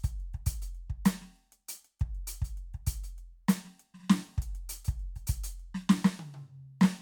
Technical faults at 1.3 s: none

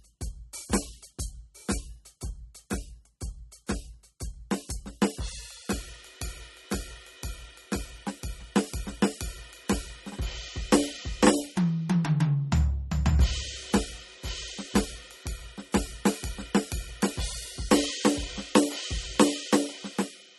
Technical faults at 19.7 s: MP3 compression

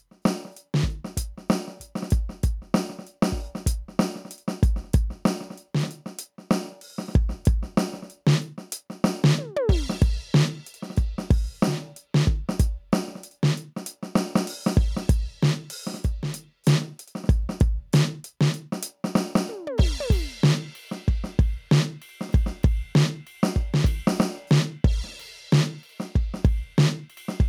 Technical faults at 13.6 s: gain pumping

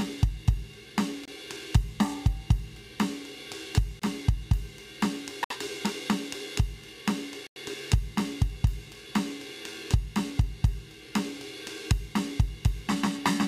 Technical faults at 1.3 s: block of digital silence

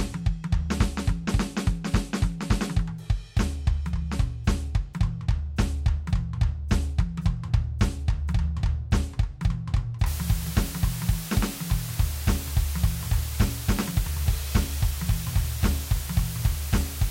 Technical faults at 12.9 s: low bit depth with dither

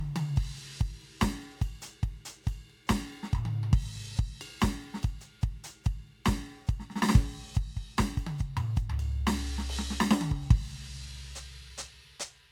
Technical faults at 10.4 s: generation loss

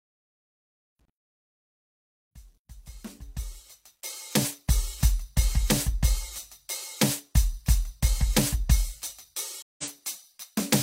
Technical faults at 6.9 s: none

